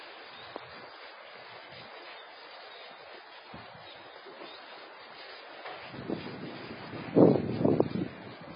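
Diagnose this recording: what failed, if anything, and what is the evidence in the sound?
The codec stage likely failed: heavy AAC compression runs through the whole recording, with nothing above 5 kHz, which fits AAC-LC at a very low bitrate near 16 kbps. Starved of bits, the encoder drops the upper bands and coarsely quantises the rest, leaving the sound dull, smeared and warbling.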